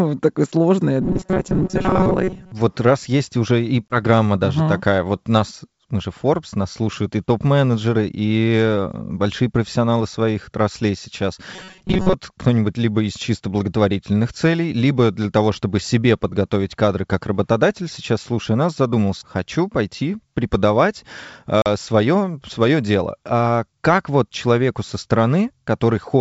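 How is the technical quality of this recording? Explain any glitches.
The recording has two kinds of glitch: bursts of robotic buzzing and two brief dropouts, heard over G.722 wideband coding at 64 kbit/s.

Robotic sound from repeated short buffers: from 1.01 to 2.52 s and 11.54 to 12.14 s, the speech becomes a rigid metallic buzz near 188 Hz. The likely cause is late audio being covered by looping a roughly 5.3 ms buffer, repeated for about half the first span and most of the second.

Packet loss on an ADPCM call: at 3.88 s a 20 ms hole, and at 21.62 s a 40 ms one, break the sound abruptly. The decoder loses sync with the sender, so audio returns briefly distorted. The second gap fits a couple of lost packets.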